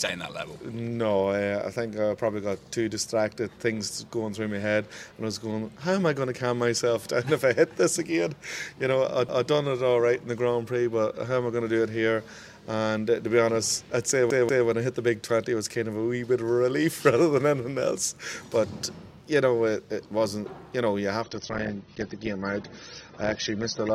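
Repeated buffer at 9.29 s and 14.30 s. New audio arrived too late, so the player replayed its last block of about 186 ms, which fits an 8192-sample buffer. The block plays twice at 9.29 s and three times at 14.30 s, each with a hard join, giving a short stutter without skipping any sound.

Adaptive stream at a lower bitrate from 21.22 s to the end. The stream switched abruptly to a lighter encoding, likely from about 96 to 24 kbit/s AAC, when the connection slowed. The treble vanishes above 6.3 kHz, and the sound turns dull and grainy, with no gap at the switch.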